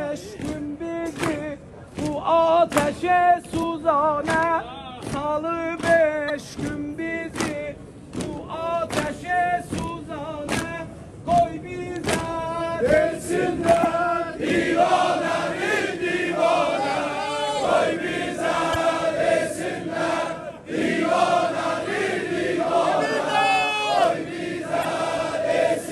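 The audio carries five short bursts of damaged data in a compressed stream, at 3.59–3.63, 6.26–6.30, 13.81–13.85, 18.72–18.76 and 24.81–24.85 s, each about 40 ms long. Corrupted bytes make the decoder misread those frames and hunt for the next valid header, so each event sounds like a brief chirp, squawk, click or short hole. A plain dropout would be a silent gap, and a simple click would be a single sharp tick.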